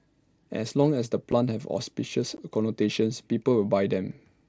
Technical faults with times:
1.32 unconcealed Bluetooth headset packet loss
2.37 unconcealed Bluetooth headset packet loss

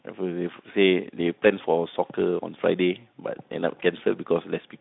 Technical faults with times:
none

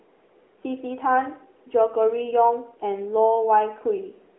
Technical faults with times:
0.00-4.39 AMR narrowband mobile codec

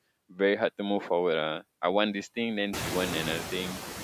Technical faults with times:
0.00-4.03 noise suppressor artifacts

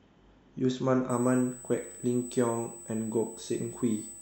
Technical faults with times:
1.09-4.21 USB whine

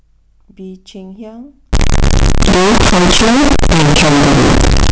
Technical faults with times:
1.73-4.92 signed and unsigned mixed up

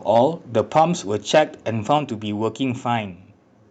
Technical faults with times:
0.15-0.26 microphone overload
0.59-0.83 microphone overload
0.79 microphone volume stepped down
1.34-1.39 microphone overload
1.90-1.92 microphone overload
1.98 microphone volume stepped down

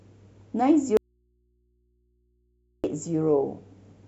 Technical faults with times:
0.97-2.84 audio dropout to a faint residue

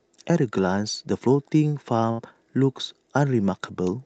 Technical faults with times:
2.11-2.20 burst of packet loss

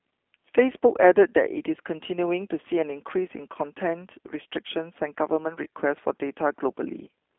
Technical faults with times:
0.00-7.38 G.729 codec

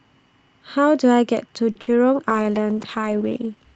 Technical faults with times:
1.71-1.77 short stall from a late packet
1.81-1.89 burst of packet loss
2.30-3.75 call bitrate drop

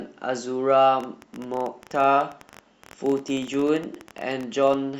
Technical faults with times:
1.00-4.75 train of clicks

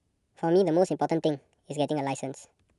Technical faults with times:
0.00-2.78 wrong sample rate

